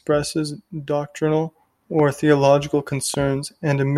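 A voltage spike, likely from a switch or static discharge, struck twice, causing loud pops at 1.99–2.02 s, about 10 dB above the speech, and 3.14–3.16 s, about 5 dB above.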